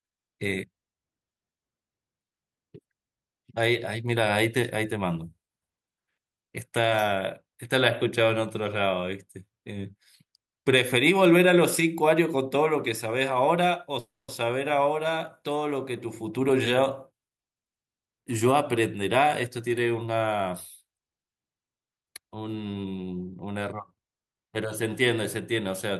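At 13.99 s the speech stops and a call audio freeze holds for about 0.31 s, to 14.30 s. The last sound carries on briefly as a decaying buzz or hiss, then drops into roughly 200 ms of silence. The likely cause is delayed packets draining the jitter buffer, with the receiver filling 290 ms while it waited. When the audio resumes it picks up where it left off, so nothing is lost, but playback now runs 290 ms later.

From 16.07 s to 18.20 s a jitter buffer speed-up follows as the receiver works that extra delay back out. It cuts short pitch-period-sized pieces again and again, removing about 0.3 s in total. The speech plays at 114% of its normal rate with unchanged pitch, so this stretch sounds hurried rather than higher in tone.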